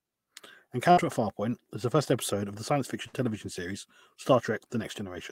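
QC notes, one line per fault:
0.91–1.00 s, burst of packet loss: lost packets are covered by about 54 ms of the preceding sound held and fading, then playback resumes with 60 ms missing.
3.07–3.16 s, burst of packet loss, just after "episode of the science": the receiver extends and fades the last sound for about 64 ms before jumping ahead, skipping 60 ms.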